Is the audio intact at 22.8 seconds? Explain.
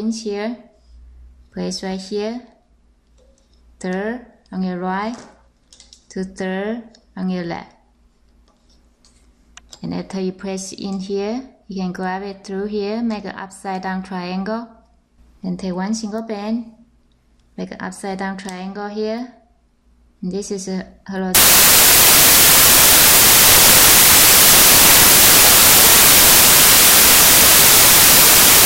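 No. Samples built from the wrong bytes run from 21.35 s to the end. Each sample's bytes are combined wrongly, through an offset, swapped order or mismatched alignment, so the rapidly varying low bits dominate the values and the audio becomes loud broadband noise.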